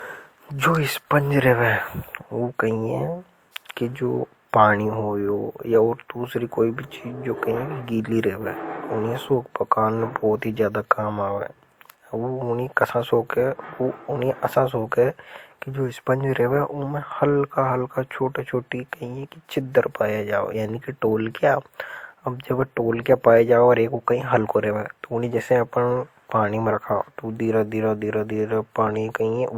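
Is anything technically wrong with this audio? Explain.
Yes. Throughout the speech, transcoding between lossy codecs is audible. The sound likely passed through a WMA-type codec and then Opus, consistent with a moderate then lower bitrate. Opus re-encodes the earlier artefacts and adds its own, so two layers of artefacts sound together.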